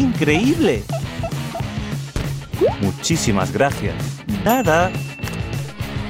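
Audio missing between chunks at 4.46 s: the sound jumps forward abruptly, as if a piece has been cut out and the two sides butted together with no gap or silence between them. Roughly a third of a second of material is gone. The likely cause is a recorder or processor that handles audio in blocks of 2.5 s and drops a short stretch while closing one block and opening the next.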